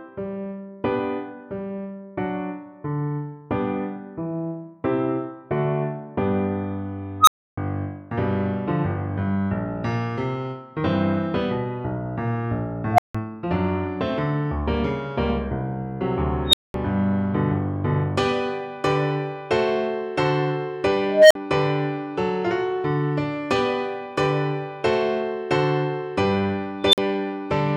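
Five unstable filter bursts hit at 7.20, 12.92, 16.48, 21.09 and 26.84 s. Each tone, from around 700 Hz to about 4 kHz, swells and clips within 55 to 220 ms, then drops into silence lasting 46 to 300 ms. That sudden cut, not a gradual howl, sets it apart from acoustic feedback.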